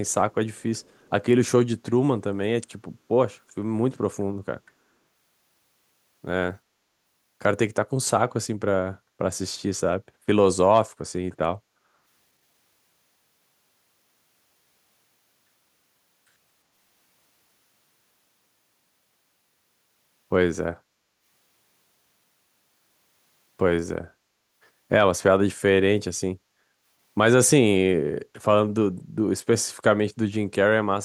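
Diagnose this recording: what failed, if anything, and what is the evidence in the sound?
Faint, delayed copies of the speech surface at 0.09–0.14 s, 0.54–0.62 s and 0.79–1.1 s, trailing the original by 353 ms and sitting far below it. This is an echo leak in call processing: loudspeaker pickup on the far side likely escaped its echo canceller and was sent back.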